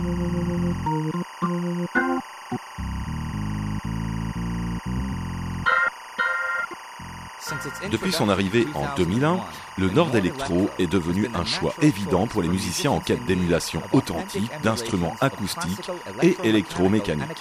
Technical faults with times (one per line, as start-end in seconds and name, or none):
0.00-17.40 timecode bleed